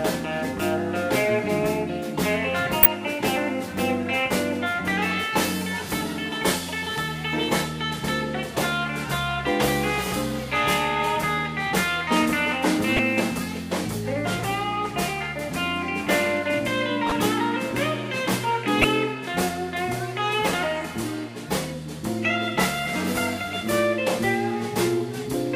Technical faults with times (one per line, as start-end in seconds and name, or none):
2.83-2.86 corrupt frame decoded
12.96-12.99 corrupt frame decoded
17.06-17.16 corrupt frame decoded
18.79-18.84 corrupt frame decoded